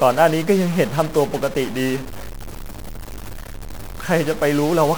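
From start to finish there's a harsh, buzzy grit riding on the speech, and the pauses fill with noise, likely a stuck bit with roughly a -30 dBFS step.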